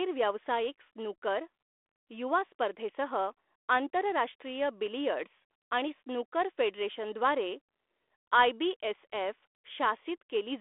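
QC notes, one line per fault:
No faults heard in this speech clip.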